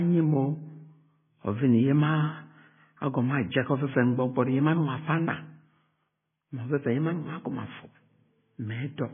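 The clip is speech, and it carries heavy MP3 compression damage from start to finish. Nothing is heard above 3.5 kHz, so the sound is dull and muffled. The encoder has cut the treble at a fixed point to save bits. Weak frequency components drop in and out between frames. That leaves a watery, swirling texture under the speech. The damage is severe enough that it likely points to a very low bitrate, around 16 kbps.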